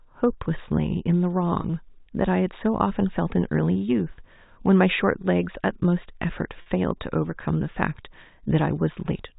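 At 1.62–1.64 s and 6.62–6.66 s, packet loss with pitch repetition fills gaps of about 20 and 40 ms (one and two 20 ms packets) with a repeated pitch cycle, heard as a brief buzzy hold rather than a silent dropout or click. The sound is band-limited below 4 kHz, as G.711 telephone coding requires.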